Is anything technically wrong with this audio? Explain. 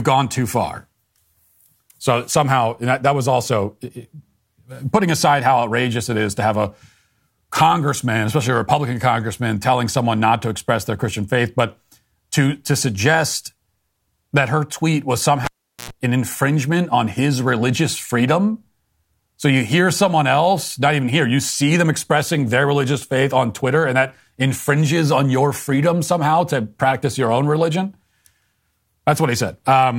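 Yes. At 15.45 to 15.90 s, between "that her tweet was" and "an infringement on his", a cable is pulled and plugged in: a pop, 406 ms of near silence, including 92 ms of 60 Hz mains buzz while only the tip touches, and a second pop.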